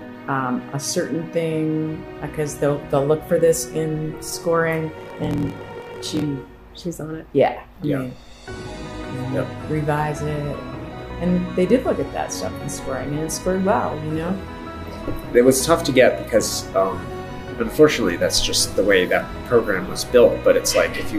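From 4.96 to 6.23 s there is a block size mismatch, truncated. One stage outputs longer blocks than the next accepts, so each block's tail is lost. A buzz at 43.1 Hz results, which fits 1024-sample reads. The sound runs 1.12 times fast.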